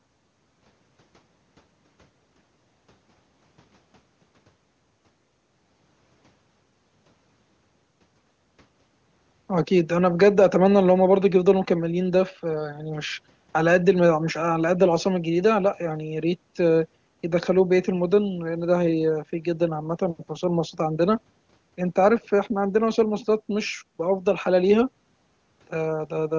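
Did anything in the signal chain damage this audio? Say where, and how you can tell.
No, nothing in this speech stood out as damage on listening.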